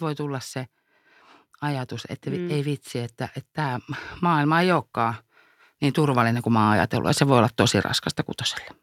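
From 5.96 s to 7.59 s there's automatic gain rising: the AGC decided the input was too quiet and eased its gain up by about 4 dB. So the speech and the room noise behind it swell up together over that stretch.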